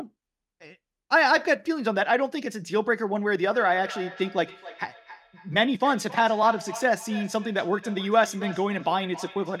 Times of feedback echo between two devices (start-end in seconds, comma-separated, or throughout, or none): 3.50-9.60